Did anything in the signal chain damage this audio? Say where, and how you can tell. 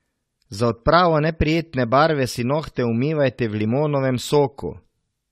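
Yes. Generation loss throughout, at the codec stage: hollow, swirly smearing, blurred onsets and nothing above 15.8 kHz, likely from about four rounds of AAC re-encoding.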